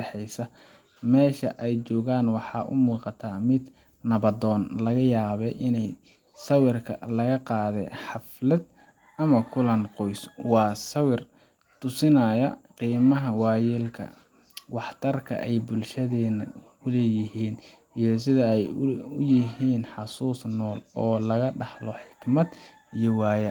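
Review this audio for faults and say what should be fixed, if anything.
Nothing stood out on listening to the speech, so there is nothing to fix.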